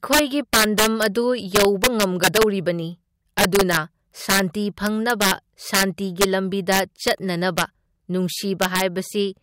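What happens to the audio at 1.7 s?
At 1.7 s the speech is hit by integer overflow, which runs through the whole clip rather than starting there. The signal is pushed about 8 dB past the integer ceiling, and instead of being limited, any sample over the maximum wraps to the opposite extreme of the range. Only around one percent of samples go over, but each one flips full-scale, so loud syllables erupt in harsh, violent cracks, far sharper than clipping.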